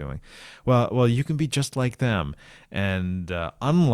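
No technical faults can be heard anywhere in the recording; the signal stays steady and intact throughout.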